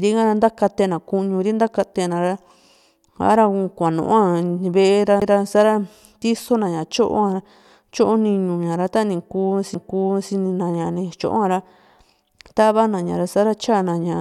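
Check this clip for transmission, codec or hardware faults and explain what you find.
Two CD skips are audible in the speech, at 5.2 s and 9.74 s. At each point the laser lost its track and landed on a different turn of the disc's spiral, so the player muted briefly (about 15 ms at the first, under 10 ms at the second) and resumed from another point in the recording. Each is heard as a small tick followed by an abrupt discontinuity in the speech. On a waveform this shows as a short flat gap with mismatched edges, and on a spectrogram as a thin vertical broadband line where the harmonic pattern breaks off and restarts out of sequence.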